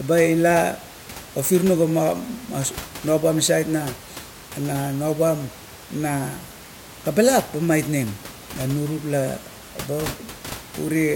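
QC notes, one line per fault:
Nothing to flag here, just a bit of room noise sitting about 17 dB under the speech, which comes from the recording space and not from the system.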